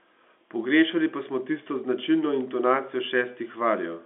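Nothing in the speech stood out as a problem on listening, with the narrow telephone band of the line coding heard as expected.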